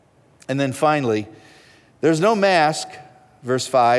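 No technical faults are audible.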